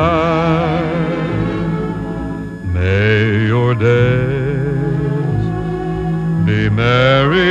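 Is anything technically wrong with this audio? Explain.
Yes. A switching supply whistle runs through the whole clip: a thin high tone wandering between 1.69 and 1.71 kHz, sitting well below the main sound. A power supply's converter is switching at an audible rate. Unlike steady mains hum, it is high-pitched and its pitch drifts.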